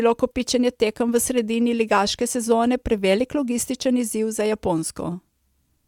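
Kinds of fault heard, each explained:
No technical faults can be heard in this speech.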